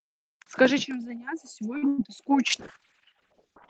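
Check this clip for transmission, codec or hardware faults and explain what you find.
Three transmission faults occur in this speech clip, all from 1.77 s onward.

From 1.77 to 1.84 s there is a short stall from a late packet. The jitter buffer ran dry, and the receiver stretched the last sound for about 47 ms before resuming where it left off. It is heard as a held, faintly buzzy syllable. A spectrogram shows harmonics frozen flat across that span.

From 1.88 to 2.00 s a burst of packet loss removes about 100 ms of audio. Concealment carries the last sound forward and turns it down as the gap goes on, and the speech then picks up further along. The waveform shows a decaying, repetitive stretch, then an abrupt restart.

From 2.52 s to the end, a call bitrate drop makes the speech rough and watery. The sound points to the encoder falling from roughly 32 to 7 kbps. Above that point the spectrogram loses its upper band, which before reached about 8 kHz, and turns smeared and blocky.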